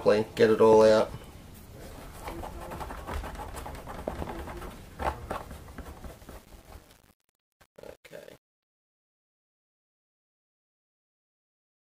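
The audio carries two bursts of loud pop and a fade spoiled by truncation distortion. At 0.73 to 0.84 s, two sharp pops land in quick succession on top of the sound, which carries on beneath them. They rise roughly 15 dB above the signal. At 4.08 to 4.24 s, another pair of pops arrives, roughly 10 dB above the signal. Each pop is a sudden electrical step or pulse added to the signal. The likely source is a plug, a switch, static or a driver glitch. The later circuits shape that jolt into the short pop heard.

From 6.11 s to the end, the fade is marred by truncation distortion. It is worst from 6.32 s onward. As the level sinks, the waveform collapses into a few square steps, so the quiet tail turns gritty. This points to a fade or volume stage keeping about 8 bits with no dither. Too few levels remain to trace the sound smoothly.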